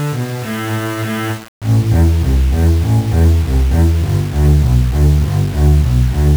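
Throughout the audio, a grainy distortion rides on every sound and shifts with it, sitting only around 25 dB below the signal, with quiet passages turning gritty. This is low bit depth without dither, likely a 5-bit rounding. Unlike dithered requantisation, which leaves steady hiss, this error tracks the signal.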